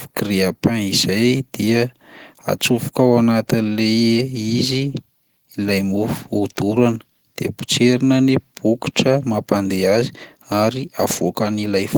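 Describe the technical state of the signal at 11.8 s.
At 11.8 s the speech signal is intact, with no audible fault at that moment.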